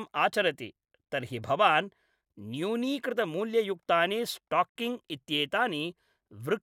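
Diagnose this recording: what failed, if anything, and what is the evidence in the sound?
Codec stage: a gap at a join of encoded pieces, a 62 ms gap at 4.69 s left by untrimmed encoder padding, shows as a blank spectrogram band.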